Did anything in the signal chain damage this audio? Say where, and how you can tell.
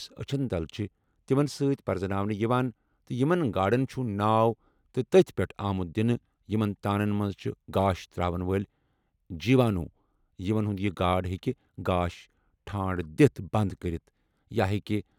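No, nothing in the chain audibly damaged this speech recording: every stage from capture through playback passes the signal without any audible degradation.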